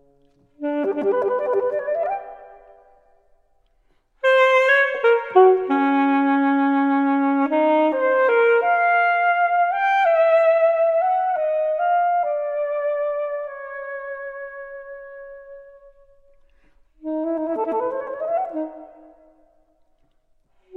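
No technical faults can be heard anywhere in this clip.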